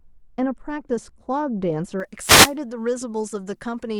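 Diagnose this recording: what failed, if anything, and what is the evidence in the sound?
For the first two seconds, 0 to 2.0 s, the speech is dull and muffled, with the top end rolling off smoothly to about 11 dB down at 10 kHz relative to 1 kHz. That's de-emphasis applied wrongly, a filtering stage in the processing chain. A treble cut meant to undo pre-emphasis landed on audio that never had the boost, or it ran twice. It's a gentle slope, not a hard cutoff, so it just sounds like the brightness got sucked out.

Then from 2.19 to 2.55 s, about a third of a second, there's a swish of static washing over the speech. That's a wireless microphone noise hit in the analogue radio link, before anything reaches the converter. The FM signal faded as reflections cancelled each other at the receiver, and the receiver's own hiss rose up until the signal recovered.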